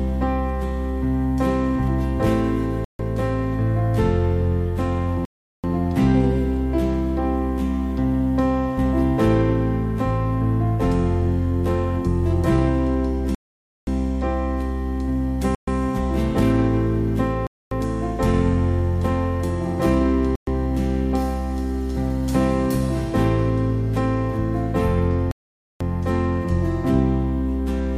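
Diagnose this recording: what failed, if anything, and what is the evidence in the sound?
The playback link broke down, most likely as a Bluetooth stall. Interference delayed packets, so the headphones' buffer emptied and output halted until retransmitted data arrived. The sound cuts to silence at 2.85 s (0.15 s gap), 5.25 s (0.39 s), 13.35 s (0.53 s), 15.55 s (0.13 s), 17.47 s (0.25 s), 20.36 s (0.12 s) and 25.31 s (0.49 s), and then resumes. Each is an abrupt dropout with irregular spacing and length.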